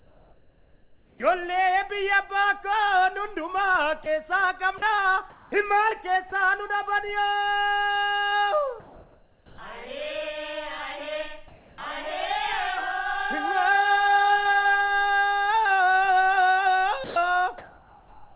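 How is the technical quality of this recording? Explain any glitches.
The recording has several gaps where the transmission paused and substituted synthetic noise. It came through a call path band-limited to 4 kHz, which fits G.711 mu-law at 64 kbps.

Comfort noise in place of the background, 0 to 1.2 s, 8.8 to 9.58 s, 11.48 to 11.78 s and 17.04 s to the end: the sender likely paused transmission in quiet stretches, leaving the receiver to synthesise noise. The background, about 29 to 32 dB below the loudest sound, becomes flat and featureless, shifting about 3 dB at 8.8 s.

Sound chopped by the voice detector, 4.04 to 6.32 s: the detector switched sending on and off repeatedly, likely misjudging quiet sound as background. About 300 ms in total is replaced by fill, so the sound turns choppy.

Sound dropped by the voice detector, 17.04 to 17.16 s: the detector likely took a quiet sound for background and stopped sending. 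About 120 ms is lost, replaced by steady noise.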